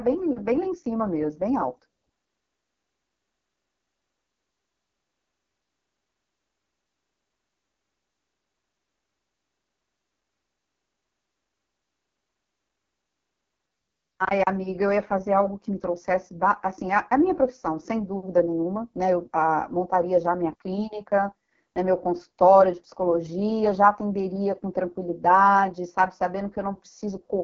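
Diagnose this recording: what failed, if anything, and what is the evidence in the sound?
The codec stage failed throughout: the AMR wideband (HD Voice) codec is running at a very low rate. The speech sounds rough and raspy from start to end, which fits the lowest 6.6 kbit/s mode. Nothing is heard above 6.8 kHz.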